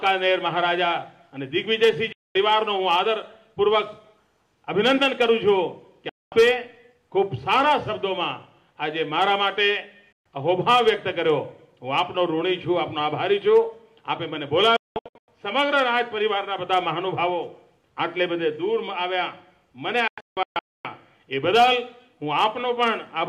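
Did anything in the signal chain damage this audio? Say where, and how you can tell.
Yes, a digital broadcast dropout: the receiver muted on failed frames. The sound cuts out with fast fades at 2.12, 6.09, 10.12, 14.76 to 15.28 and 20.08 to 20.85 s, the last two as scattered short holes.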